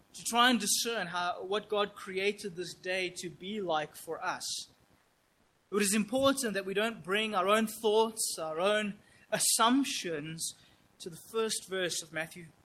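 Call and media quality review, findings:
Background texture drops out at 4.99 to 5.71 s, replaced by a steady, featureless hiss about 5 dB quieter, lasting 0.72 s. This is comfort noise in place of the background, likely from discontinuous transmission, consistent with Opus DTX, with the receiver synthesising the fill.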